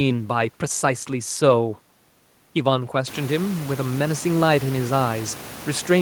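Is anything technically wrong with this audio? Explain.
No, nothing here is technically wrong.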